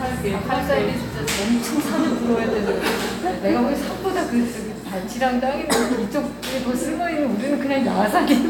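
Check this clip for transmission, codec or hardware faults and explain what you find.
No faults can be heard.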